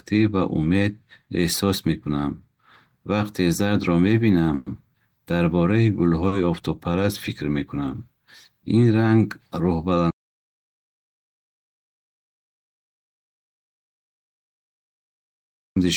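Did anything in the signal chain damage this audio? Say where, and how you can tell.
Yes. There's a call audio freeze at 4.55 to 4.68 s, a network and jitter-buffer issue. The speech hangs on a fading buzz or hiss for about 110 ms, then resumes exactly where it stopped. Packets were likely delayed in transit, so nothing's lost, but everything after runs 110 ms later.

At 6.28 to 6.34 s there's a short stall from a late packet, again at the jitter buffer. The last sound gets stretched for 40 ms with a slight buzz or dip before the packet turns up and playback carries on from the same point, adding another 40 ms of delay.

The big one is an audio dropout to silence from 10.11 to 15.76 s, at the capture or input stage. The speech cuts off mid-flow into silence with no room tone, and about 5.65 s of audio is simply gone, likely a lost input or stray mute while recording continued.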